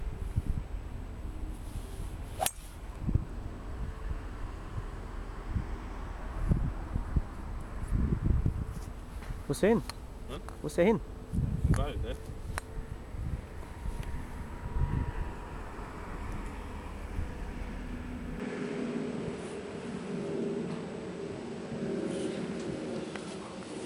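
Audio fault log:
18.40–23.86 s input switched to a poorer device: with no gap or level jump, the top end stops near 10.1 kHz and faint new background noise appears, likely from a lesser mic taking over.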